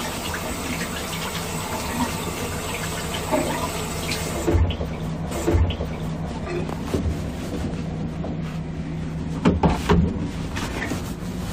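At 5.31 s a small blip sounds, and the audio replays about one second of itself through 6.31 s: a stream segment repeated, queued twice by the player.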